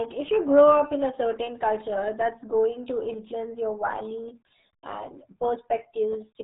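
RealAudio 14.4 codec damage runs throughout this speech clip: nothing passes above 3.9 kHz, and heavy gargly, muffled artefacts fit an 8 kbit/s dial-up-era speech codec.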